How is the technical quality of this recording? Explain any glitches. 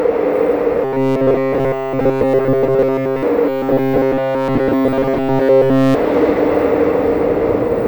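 The recording has a clear fault: two long stretches of robotic sound from repeated short buffers. The first runs from 0.84 to 3.23 s, the second from 3.49 to 5.95 s. In both, the sound becomes a rigid, metallic buzz pitched at 133 Hz. The likely cause is audio arriving too seldom, so the software loops a tiny slice of about 7.5 ms. Nearly all the real signal is replaced by these repeats, which impose that fixed tone.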